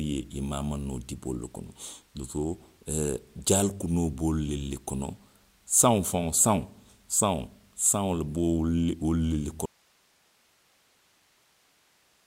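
Speech that suffers an audio dropout to a faint residue at 9.66 s, lasting to the end: the voice stops abruptly and only hiss remains, roughly 40 dB down, likely from a lost signal feed into a live path. A waveform shows a sudden collapse to a thin noise band; a spectrogram shows speech harmonics vanishing, leaving faint broadband noise.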